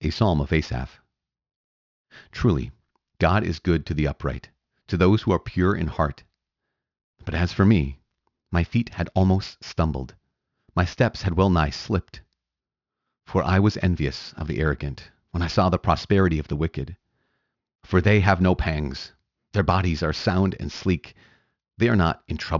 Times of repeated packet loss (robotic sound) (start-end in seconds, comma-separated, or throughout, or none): none